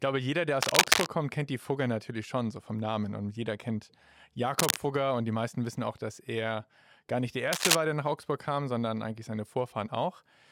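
Three bursts of cable scratch noise break in at 0.57 to 1.07 s, 4.59 to 4.77 s and 7.53 to 7.76 s, each a harsh, uneven rustle roughly 5 dB louder than the sound beneath it. The likely cause is a worn lead or connector being disturbed so its contact resistance flickers. On a spectrogram each appears as a dense, broadband smear of speckled energy; the waveform shows ragged, spiky clusters riding over the signal.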